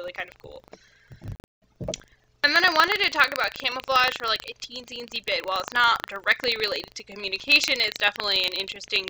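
Throughout, the ring buffer's writer and reader have slipped. This buffer tearing splices a small slice of older audio into each period, producing a steady 25 Hz rattle.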